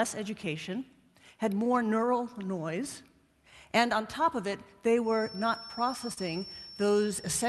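A feedback whistle runs from 5.0 s to the end of the clip: a steady, thin tone at 5.4 kHz sits about 15 dB below the audio, rising and falling slowly in level. The likely cause is a loudspeaker-to-microphone loop sitting just short of instability, so that one frequency keeps ringing without building into a full howl, and it carries through the call codec, whose top end stops near 12 kHz. Short concealed packet loss occurs at 6.13 to 6.19 s, where about 40 ms of audio never arrived in time. The receiver covered roughly 31 ms of that gap by extending the preceding sound, continuing its pitch if voiced or as shaped noise if not, then blending back into the real signal. The result is a brief smear or wobble, and any short sound inside that window can disappear.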